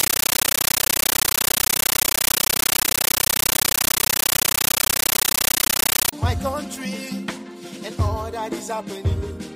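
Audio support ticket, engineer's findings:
Loud chattering static, 0.0 to 6.13 s, replacing the programme sound. Noise bursts about 13.3 ms long, repeating 31.25 times a second with silent gaps. Compressed stream played as audio: Dolby Digital bitstream on S/PDIF or HDMI sink treated as PCM, never decoded. Burst pattern fits a 640 kbps AC-3 stream. Check receiver or DAC passthrough/decoder setting.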